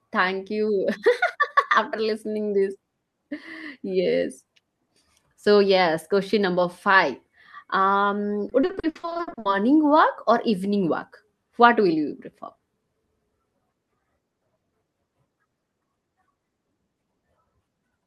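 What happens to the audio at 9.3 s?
At 9.3 s the speech turns choppy and robotic, part of a burst of repeated packet loss from 8.49 to 9.47 s. Sixteen short gaps, the longest 60 ms, were each patched by extending the preceding sound, covering about half that stretch.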